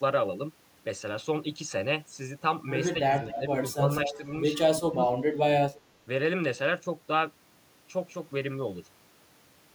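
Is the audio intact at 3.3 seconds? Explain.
No. From 2.94 to 3.43 s the speech dips and thins in patches, falling by about 10 dB at its deepest, with roughly 0.3 s affected in total. This is speech suppressed in double talk: with both ends active, the echo canceller likely mistook the local talker for loudspeaker echo and attenuated it along with the echo. From 3.31 to 3.4 s a faint copy of the voice, roughly 10 dB below the speech and delayed by 233 ms, also slips through. That is an echo leak, likely from an echo canceller that failed to remove all of its microphone's loudspeaker pickup.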